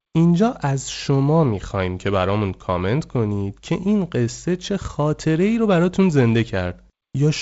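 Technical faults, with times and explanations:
No technical faults can be heard in this speech.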